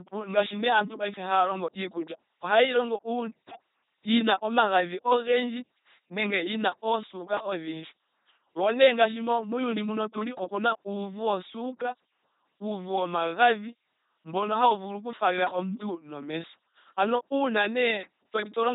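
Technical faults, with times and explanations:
Throughout, LPC-10 vocoder: the speech is rebuilt from a ten-pole vocal tract filter fed either a pulse train or noise, never a mix, which fits a 2.4 kbit/s LPC-10 link. The damage is heavy: a buzzing, mechanical robot voice with nothing above 3.8 kHz.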